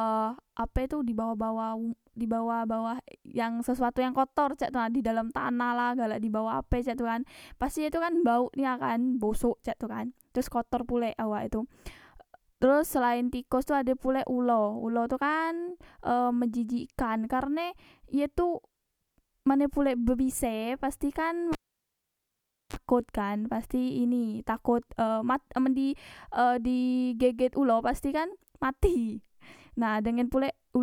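At 21.52 s the speech is cut by a cable pulled and plugged in while live. A sharp pop opens a gap of about 1.19 s of near silence. Then comes a 37 ms burst of 50 Hz mains buzz as only the plug tip makes contact, and a second pop at 22.76 s as the signal returns just before "kan pasti ini takot". On the waveform, two spikes bracket a flat line. The spectrogram shows broadband vertical streaks at each pop and a short stack of 50 Hz harmonics before the second.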